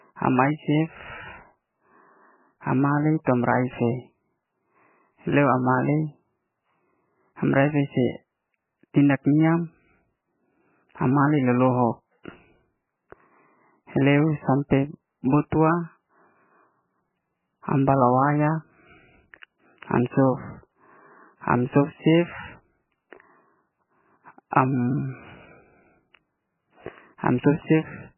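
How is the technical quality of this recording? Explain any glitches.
Pretty rough, honestly. The whole recording carries heavy codec damage, and there are two short pre-echo blips on top of that.

The MP3 compression is the big one, and it runs all the way through. There's nothing above about 3 kHz, so the speech sounds dull and boxed-in. The damage is heavy enough to fit a very starved bitrate, somewhere around 9 kbps. When the encoder runs out of bits like that, it chops the treble and keeps dropping weaker frequency lines in and out frame by frame. That's what gives the audio its watery, swirly texture and the smeared consonants. MP3 at a very low bitrate is the likely cause.

There's pre-echo at 3.24 to 3.27 s and again at 15.50 s. In each spot a short hiss creeps in just ahead of a sharp onset, about 25 ms early the first time and 19 ms the second. The codec spreads its quantisation noise across a whole block. 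So when a hard attack lands late in the block, noise sized for the loud part leaks into the quiet gap before it, and the attack itself comes out soft or smeared.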